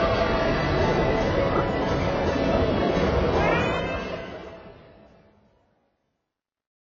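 AAC compression damage runs through the whole clip of everyday sound, from the first moment to the end: nothing survives above 7.3 kHz, and what remains sounds dull and smeared, with a warbling, fizzy texture in sustained parts. The likely cause is heavy AAC-LC coding at a very low bitrate, around 16 kbps, where the encoder drops the top of the spectrum and starves the remaining bands of bits. The damage stays audible right through to the end at 6.85 s.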